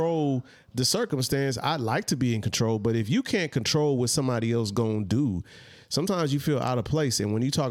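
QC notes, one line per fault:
No faults heard across the recording.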